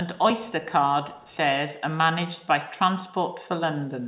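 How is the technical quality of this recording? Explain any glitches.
The recording has one glitch, a brief echo leak, heard over the narrow, telephone-band sound of the call.

From 1.13 to 1.37 s a very faint copy of the speech returns about 321 ms late. This is likely the far end's echo canceller letting loudspeaker sound back through its microphone. Unlike room reverberation, it is a distinct delayed repeat, not a smooth decay.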